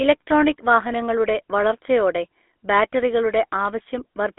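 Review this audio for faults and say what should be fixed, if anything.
The speech is buzzy and gravelly from start to finish, with a thin, boxed-in quality and no air or sibilant sparkle. Nothing is heard above about 3.8 kHz, and the useful band sits between roughly 250 Hz and 3.4 kHz. This is GSM full-rate codec damage. The coder models the vocal tract and excites it with a sparse, regularly spaced pulse train, which fits a 13 kbps GSM full-rate coding stage. Discarding most of the excitation detail leaves the rasp, and the narrowband phone path removes the highs. To prevent it, capture or route the audio over a wideband path such as a direct recording or a wideband codec rather than a GSM call leg.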